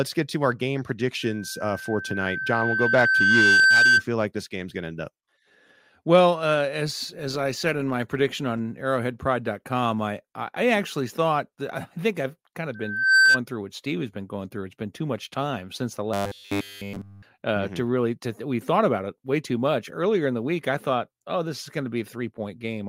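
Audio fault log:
1.22–4.04 s and 12.74–13.41 s, loudspeaker feedback squeal: the microphone picked up its own loudspeaker and loop gain exceeded one at 1.6 kHz. That tone fed on itself, swelling over about two seconds after "get to our game" and in under half a second after "think I've kind of," reaching about 10 dB above the speech.
16.14–17.24 s, robotic sound from repeated short buffers: after "much time since the," new audio likely arrived too seldom, so playback kept repeating a short slice, which fits a 10 ms buffer, across essentially the whole stretch. This imposes a rigid, metallic 100 Hz buzz on the speech.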